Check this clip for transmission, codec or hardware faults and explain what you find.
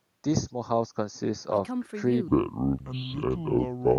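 Two faults affect this speech clip: comb filtering from a channel delay across its whole length, and a section at the wrong speed in the final stretch.

Channel delay (comb filtering) runs from start to end. One channel trails the other by roughly 0.15 ms, and when the two are summed to mono, content shared by both cancels at regularly spaced frequencies, the first near 3 kHz. The speech sounds thin and hollow, with the upper presence region scooped out. The notches never move, which separates this from a sweeping phaser or flanger effect, and the timing and pitch are untouched.

The section at the wrong speed runs from 2.28 s to 3.99 s. There the audio plays at 0.645 times its proper rate, so pitch and tempo fall together by about seven semitones. The speech turns deep, slow and drawn out, with a sudden drop at 2.28 s rather than a gradual drift. This is likely a playback or editing step running that segment against the wrong clock. 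Because pitch and duration move in lockstep, it differs from a pitch-shift effect, which would lower the pitch without stretching the timing.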